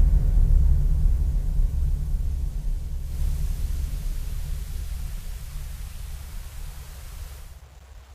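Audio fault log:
2.90 to 7.66 s, digital radio blending to analogue: a 308 ms cross-fade to FM. Hiss rises, roughly 30 dB down, and the level shifts by about 3 dB.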